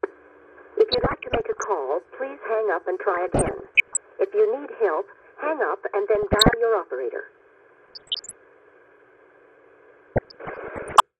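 Throughout, the audio sounds dull, with a gurgling, granular edge. That is likely MP2 compression at a low rate, which fits roughly 80 kbps. Upper sub-bands drop out and flicker. The bands that remain are coarsely quantised.

DAB burbling strikes at 0.92 to 1.66 s, 3.14 to 3.97 s, 6.15 to 6.54 s, 7.86 to 8.33 s and 10.09 to 11.00 s. Bit errors slip past the error correction into the audio frames. Short blips of noise appear in single sub-bands. The burst at 7.86 s is the densest.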